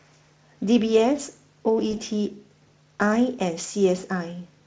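At 1.91 s, VoIP packet loss concealed by the speech codec: about 20 ms of speech went missing and the decoder extrapolated the previous frame, leaving a brief stretched, fading smear through 1.94 s.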